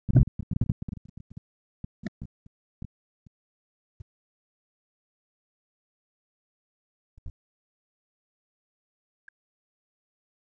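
Speech suppressed in double talk: with both sides speaking, the echo canceller likely mistook this talker for loudspeaker echo and cut it by around 40 dB at worst. The speech sinks and breaks up from 0 to 1.49 s, 1.77 to 2.98 s, 3.44 to 4.68 s, 4.98 to 7.17 s and 7.76 s to the end.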